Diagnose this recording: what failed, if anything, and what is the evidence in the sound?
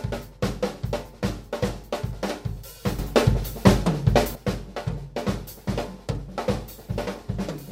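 Sudden gain jump in digital processing. From 2.99 s to 4.35 s, sound and noise rise together by about 11 dB. Likely an unramped gain change.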